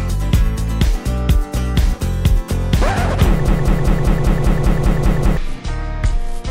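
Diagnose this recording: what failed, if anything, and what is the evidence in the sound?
Broken-record loop, 3.48 to 5.37 s: a 197 ms fragment repeats ten times, likely from a stalled playback buffer resending its last block instead of new audio.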